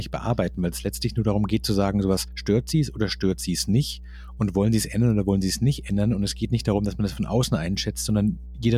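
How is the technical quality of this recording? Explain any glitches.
The recording is marred by mains hum running throughout the speech. A steady 60 Hz tone, roughly 15 dB below the voice, comes from power-line coupling through a ground loop or nearby transformer. It shows on a spectrogram as an unbroken horizontal line at 60 Hz.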